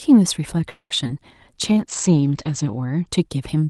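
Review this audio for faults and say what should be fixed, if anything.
Packets most likely stalled in transit and the jitter buffer ran dry, causing a call audio freeze from 0.69 to 0.92 s. The receiver stretched the last sound into a fading tail for about 0.21 s, including roughly 70 ms of near silence, then resumed exactly where it left off. Nothing is lost, but a pause is inserted and playback runs 211 ms later afterwards. To prevent it, give the jitter buffer more headroom, or fix the network route causing the delay spikes.

Two back-to-back short concealed packet losses follow, at 1.04–1.07 s and 1.07–1.10 s, each wiping out 20 ms of audio before it reached the decoder. The receiver papered over both holes by extending the preceding sound and crossfading back. The result is a brief smear or wobble of about 55 ms, in which a quick consonant can drop out. To prevent it, enable forward error correction or redundancy so isolated lost packets can be rebuilt.

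From 1.68 to 3.13 s there is a call bitrate drop. The sender's bandwidth estimate collapsed, and Opus was pushed from 32 kbps down to 10 kbps, where it stayed for about 1.07 s. At that rate the encoder quantises coarsely and narrows the audio band from 12 kHz to 8 kHz. The speech turns muffled, rough and watery until the bitrate climbs back. To prevent it, raise the minimum bitrate floor or stabilise the link so the congestion controller doesn't back off so sharply.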